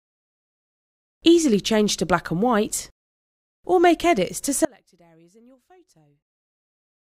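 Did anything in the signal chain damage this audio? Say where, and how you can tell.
Yes, an audio dropout to a faint residue from 4.65 s onward: abrupt, with sound left about 30 dB down, likely a broken analogue connection leaving the input live.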